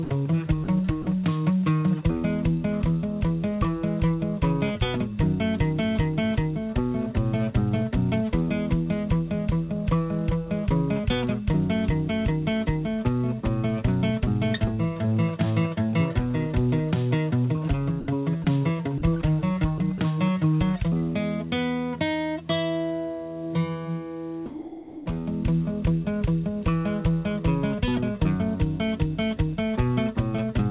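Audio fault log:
0.04–0.10 s, 0.64–0.68 s, 1.02–1.06 s: sound dropped by the voice detector. Brief gaps of 60, 40 and 40 ms where the sound gives way to flat, steady noise, likely because the sender's detector judged quiet sound as background. On a spectrogram these show as short uniform grey patches below 4 kHz, and as small even-amplitude notches in the waveform.
18.00–18.08 s, 18.44–18.46 s, 18.98–19.02 s: sound dropped by the voice detector. Again the sound is briefly replaced by smooth comfort noise, about 70, 20 and 40 ms of real content lost, likely from low-level passages falling under the detector's threshold. These appear as thin featureless vertical bands with a drop in waveform envelope.
19.78–20.00 s: sound chopped by the voice detector. Over this 0.22 s stretch the sending switches off and on, so about 40 ms of sound is swapped for comfort noise. Likely detector toggling; the spectrogram shows broken, interrupted energy.
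24.46–25.06 s: sound dropped by the voice detector. A full 0.6 s of sound is replaced by steady comfort noise, likely a quiet stretch misread as background. In the spectrogram it is a wide block of even, structureless noise capped at 4 kHz, and in the waveform a flat low-amplitude band.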